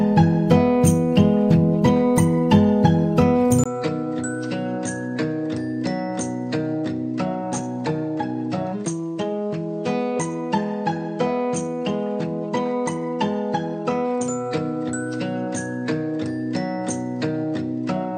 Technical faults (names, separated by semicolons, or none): input switched to a poorer device